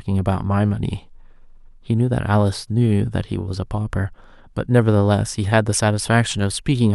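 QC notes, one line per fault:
No audible faults found in this speech clip.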